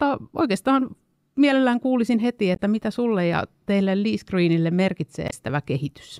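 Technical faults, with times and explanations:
2.53–2.60 s and 5.27–5.33 s: damaged data in a compressed stream. Each burst lasts about 60 ms. Corrupted bytes in the encoded speech make the decoder misread those frames and lose sync until it finds a valid frame header.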